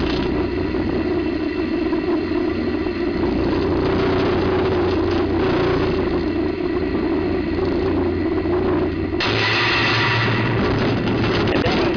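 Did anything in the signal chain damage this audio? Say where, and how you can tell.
No, there's no audible damage from any stage of the chain, with nothing in the signal that points to trouble in the wiring, conversion, processing, transmission, storage or playback.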